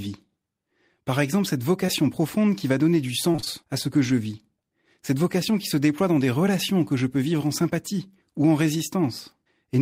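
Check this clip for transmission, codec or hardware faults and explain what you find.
Two transmission faults affect this speech clip, both from packets that failed to reach the decoder in time.

Short concealed packet loss, 1.86 to 1.90 s: about 20 ms of the stream went missing, and the receiver bridged the hole by extending the preceding sound for roughly 16 ms before crossfading back into the real signal. Voiced material is carried forward at its last pitch, unvoiced material as shaped noise, so the join comes across as a brief smear or wobble in the speech.

Repeated packet loss (robotic sound), 3.32 to 3.48 s: the connection dropped data four separate times within this stretch, losing about 80 ms in total, with the longest gap around 27 ms. Each gap was patched by continuing the last sound, and the next loss arrived before the audio could settle, so about half of this span is synthetic fill. 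The speech turns choppy here, with fragments missing.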